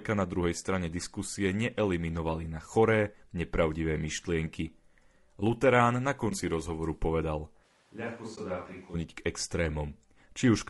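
Throughout, the speech sounds rough and grainy, with noise filling the gaps between harmonics on a spectrogram, likely low-delay AAC compression such as AAC-ELD at a low bitrate near 32 kbps. From 6.29 to 6.32 s, an AAC frame loss with muting leaves a 20 ms brief dip, faded in and out in the waveform. From 7.65 to 8.93 s, a sudden switch, likely to a distant microphone, makes the sound roomy and hollow. The waveform drops by roughly 10 dB, the low end thins, and room noise rises to around 30 dB below the speech. Inside that stretch, another muted frame loss from 8.35 to 8.38 s removes 20 ms as a faded vertical gap.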